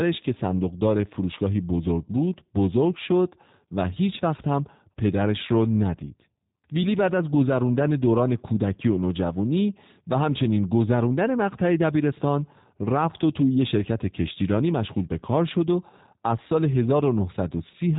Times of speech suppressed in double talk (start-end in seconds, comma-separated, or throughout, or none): none